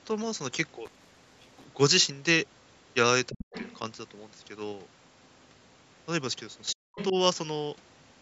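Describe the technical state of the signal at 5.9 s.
At 5.9 s the speech is intact, with no fault audible, only the ordinary call microphone processing and its normal band limit, which takes out the lowest bass.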